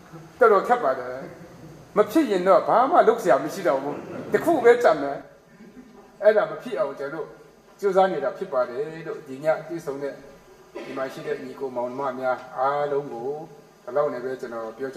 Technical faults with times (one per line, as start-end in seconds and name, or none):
5.22-14.96 channel delay (comb filtering)